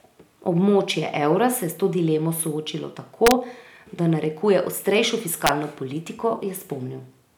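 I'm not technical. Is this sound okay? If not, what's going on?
No. An integer overflow happened twice: the loud moments went past the largest number the system can hold and flipped to the opposite extreme, producing sharp, violent cracks in the speech. You can hear them from 3.27 to 3.31 seconds, just after "s to dilemo soočilo", and from 5.47 to 5.49 seconds, just after "da narekuje ostrejšo".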